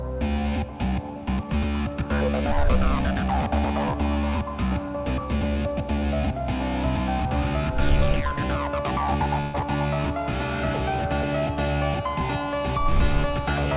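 From 9.41 to 9.55 s the sound turns into a held, fading smear for about 128 ms before jumping ahead. This is a burst of packet loss: roughly 120 ms of audio never arrived in time, so the receiver stretched and faded the last sound to bridge the gap, and that stretch of the original is simply gone.

At 11.55 s there is a brief smear or wobble lasting about 10 ms. This is short concealed packet loss: a sliver of audio went missing, and the decoder patched it by extending what came just before, then blended back into the real signal. Throughout, the band stops at 4 kHz, which fits a G.711 call codec.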